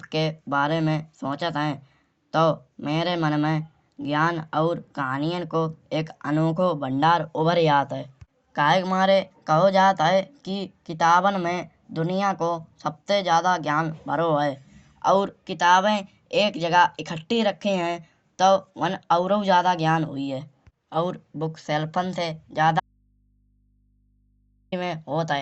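Audio dropout to a faint residue from 22.8 to 24.72 s in this speech recording: the voice cuts out abruptly for about 1.92 s, leaving only mains hum roughly 40 dB below the signal, likely because the source was lost while the input stayed live and open.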